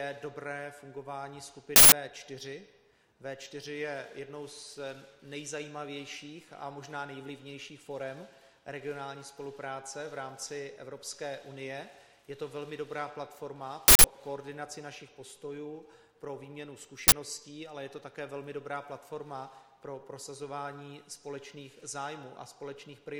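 Uninitialised buffer bursts strike at 1.76 to 1.92 s, 13.88 to 14.04 s and 17.08 to 17.12 s: short, loud blasts of digital noise where the audio was played out of blocks that fits 160 ms and 40 ms buffers before the real samples were written, so leftover memory was heard.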